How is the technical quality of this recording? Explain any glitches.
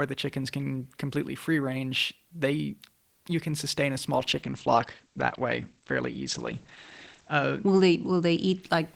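The quality takes a clear hit partway through. Right after "you can sustain a", at 4.14 s, there's a call bitrate drop lasting to 8.68 s. The encoder gets starved of bits, coding coarsely and cutting highs at 8 kHz, which fits a fall from 32 to 14 kbps. The sound turns muffled and rough, worst for about 3.15 s.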